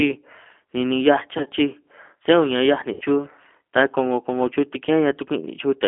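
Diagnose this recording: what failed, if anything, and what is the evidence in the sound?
The codec stage is the first problem. The call ran through G.729 (the G.729A variant) at 8 kbit/s, which rebuilds speech from a vocal-tract filter, a pitch predictor and a few sparse excitation pulses per frame instead of sending the waveform itself. The audio is confined to roughly 250 Hz to 3.4 kHz, and the codec damage is plainly audible throughout: the speech sounds rough, thin and slightly synthetic.

The network stage dropped packets twice, and the G.729 decoder concealed the gaps. From 1.38 to 1.48 s, about 70 ms of audio is missing, scattered over 80 ms, with the longest hole around 40 ms. This points to seven lost 10 ms frames. From 2.93 to 3.03 s, 80 ms drops out. In both places the decoder reuses its last pitch and filter, so the sound smears into a buzzy tone or coloured noise that fades, and stays weak briefly after packets resume.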